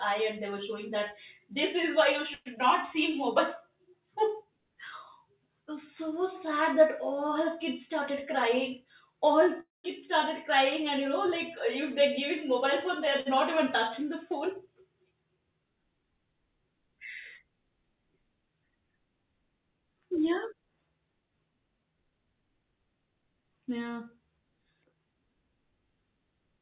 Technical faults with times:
2.34-2.48 call audio freeze
2.56-2.58 short concealed packet loss
2.95-3.78 jitter buffer slow-down
8.00-9.48 jitter buffer speed-up
9.60-9.86 call audio freeze
13.20-13.28 short stall from a late packet
22.11-25.73 jitter buffer speed-up

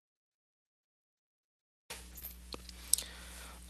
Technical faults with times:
2.11-2.17 lost packet rebuilt from error correction
2.19-2.23 short concealed packet loss

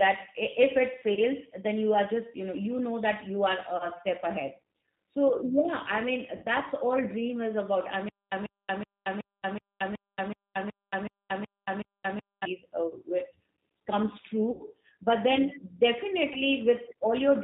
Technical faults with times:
0.00-17.44 G.729 codec
1.14-1.21 VoIP packet loss concealed by the speech codec
3.77-3.90 VoIP packet loss concealed by the speech codec
6.36-6.46 VoIP packet loss concealed by the speech codec
14.51-14.63 VoIP packet loss concealed by the speech codec
16.33-16.43 VoIP packet loss concealed by the speech codec

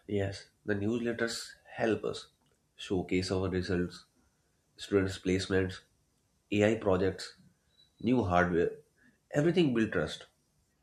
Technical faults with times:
none

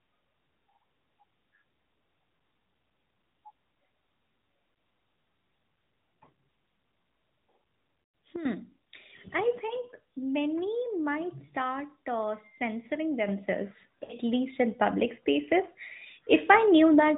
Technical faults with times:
4.74 lost AMR speech frames
8.04-8.14 lost AMR speech frames
8.36-8.45 sudden gain jump
9.68-9.73 lost AMR speech frames
11.46-11.48 lost AMR speech frames
13.28-17.18 sudden gain jump
14.04-14.12 lost AMR speech frames

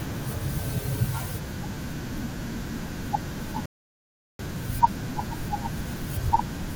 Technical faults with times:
3.66-4.39 rebuffering stall

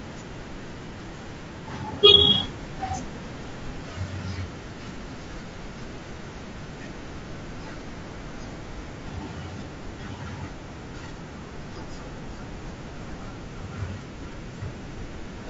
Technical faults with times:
0.00-15.49 low-delay AAC compression

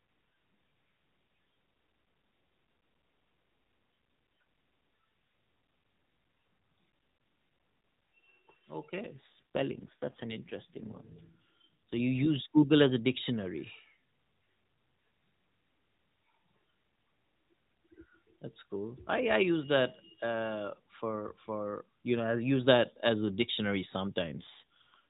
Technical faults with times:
9.02-12.00 AMR rate drop
24.22-24.99 AMR rate drop

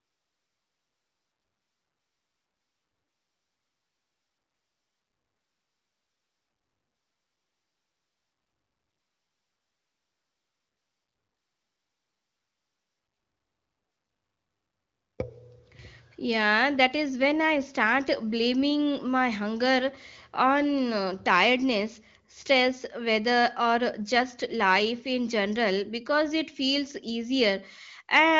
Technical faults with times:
none

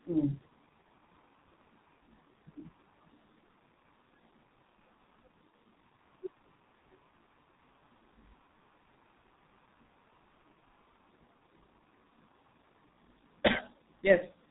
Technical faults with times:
0.00-14.50 G.723.1 codec

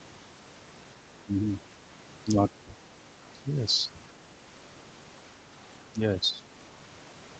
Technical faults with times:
5.83-6.45 speech suppressed in double talk

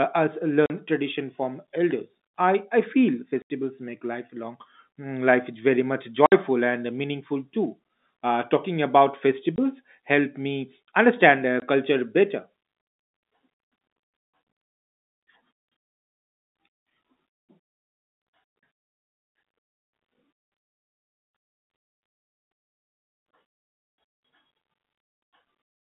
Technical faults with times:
0.66-0.70 packet loss filled with silence
3.42-3.50 packet loss filled with silence
6.26-6.32 packet loss filled with silence
9.56 packet loss filled with silence
11.60 packet loss filled with silence

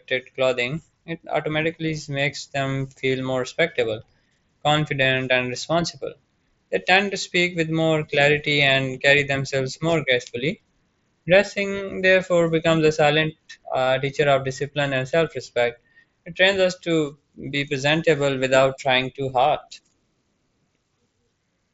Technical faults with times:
5.03 concealed Bluetooth headset packet loss
8.73 concealed Bluetooth headset packet loss
13.85 concealed Bluetooth headset packet loss

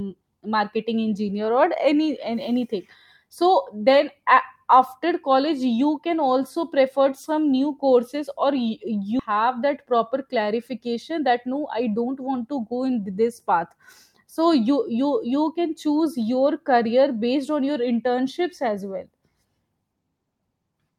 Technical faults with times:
9.19 skip ahead
11.10-13.02 jitter buffer speed-up

